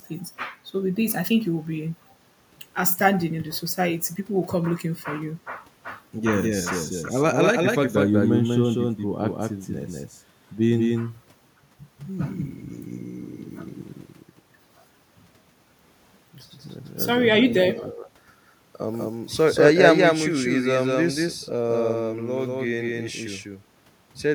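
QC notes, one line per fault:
Throughout: doubled audio track. A second full-band copy of the speech, about as loud as the original, trails it by roughly 200 ms, likely from a slower second capture path. Every onset repeats with no decay or room colour, and the waveform and spectrogram show each syllable's pattern duplicated at that offset.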